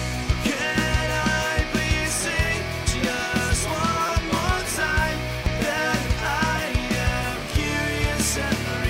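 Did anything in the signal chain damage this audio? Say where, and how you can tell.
Yes, at the driver or buffer stage: a repeated buffer. From 4.06 to 4.09 s, and again at 5.45 s, a tiny slice replays with hard joins. It sounds like a brief buzz. The slice length fits a 256-sample buffer, and roughly 20 ms and 10 ms of audio are lost.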